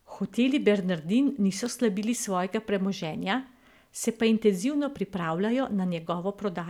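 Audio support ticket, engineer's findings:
Electrical switching spike at 1.66 s: sharp snap over the speech, peaking around -25 dBFS. Likely a nearby switch, relay or static discharge arcing, with the brief burst coupled into the audio line and added on top of the signal.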